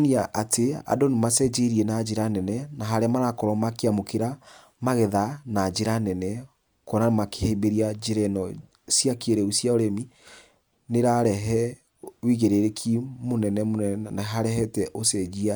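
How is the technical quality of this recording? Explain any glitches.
No technical glitches can be heard anywhere in this speech recording. There is nothing in the audio that needs explaining.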